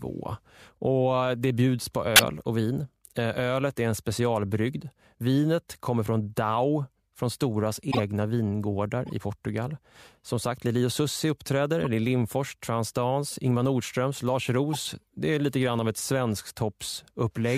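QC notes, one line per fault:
2.16–2.25 s (after "det bjuds på", before "och vin"), 7.91–8.00 s, 9.06–9.12 s, 11.81–11.87 s (before "det är"), 14.73–14.76 s: corrupt frame decoded. Each event spans a few frames whose damaged gains or codes were decoded anyway, putting energy at the wrong frequencies and producing short chirps and noise bursts. The first peaks near -10 dBFS and the 9.06 s event near -25 dBFS.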